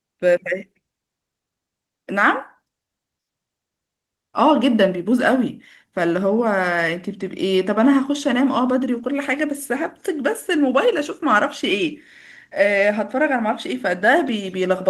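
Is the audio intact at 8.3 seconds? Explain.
Yes, the speech at 8.3 seconds is intact, with no dropout, click or other fault at that moment.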